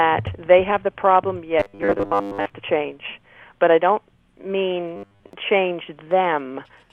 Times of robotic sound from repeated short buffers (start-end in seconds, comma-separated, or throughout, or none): 1.60-2.50, 4.96-5.33